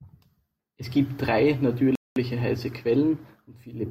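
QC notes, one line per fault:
1.95–2.16 s, playback stall: the speech drops to silence for 0.21 s right after "gibt drei", then resumes, likely because the player briefly ran out of data.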